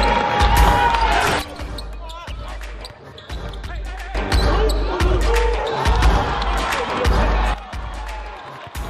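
At 1.42 s the level drops by about 13 dB and stays down until 4.15 s, then falls by about 12 dB again from 7.54 s to the end: a sudden gain jump, likely an unramped gain step. Unlike a fade or compressor action, sound and background noise step together instantly.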